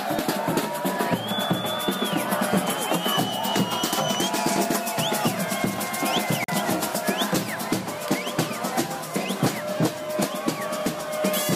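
At 6.44 s the audio drops to silence until 6.50 s, then resumes further along. This is likely a Bluetooth dropout, where late packets were discarded.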